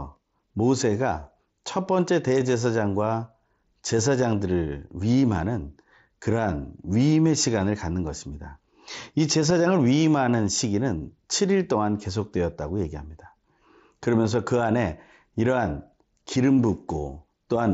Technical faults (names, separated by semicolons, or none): none